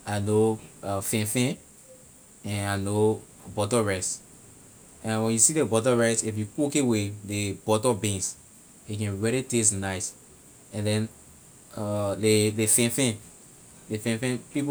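No technical faults can be heard anywhere in the recording.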